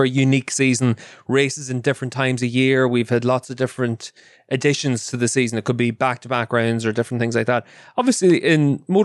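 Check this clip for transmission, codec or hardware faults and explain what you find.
Nothing stood out as a fault on listening to this speech recording.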